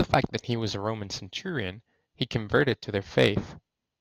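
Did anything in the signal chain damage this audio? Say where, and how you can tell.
Yes, at the converter: sample clock jitter runs through the whole clip. A fine hiss rides on the speech, strongest on loud and bright sounds and gone in pauses. Timing wander of a microsecond or two leaves error roughly 40 dB below the signal.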